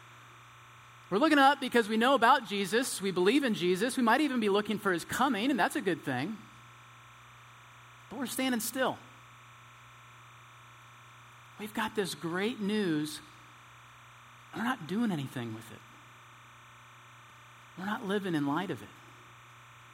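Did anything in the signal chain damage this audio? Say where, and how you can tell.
Yes. Timecode bleed from the analogue wiring runs through the whole clip. A steady chirping warble sits roughly 25 dB below the speech, flipping between tones near 1 kHz and 2 kHz. Its 29.97 frames-per-second rhythm marks it as linear timecode crosstalk from an adjacent cable or track.

At 3.28 s there is a single sharp click, a thin vertical line in the spectrum. It is likely dropped samples at the driver or buffer stage. A fraction of a millisecond of waveform went missing, so the signal jumped abruptly to a later value.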